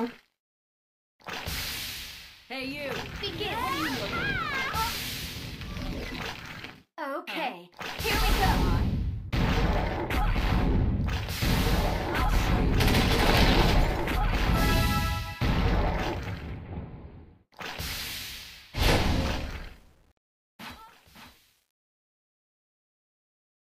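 From about 19.44 s to the end at 23.74 s, the fade-out picks up truncation distortion on a fade. The fade stage seems to drop to around 9 bits with no dither, so as the level sinks, the waveform gets chopped into coarse square steps. It's already grainy near the start of the fade, and from roughly 20.08 s onward it turns properly gritty instead of trailing off cleanly.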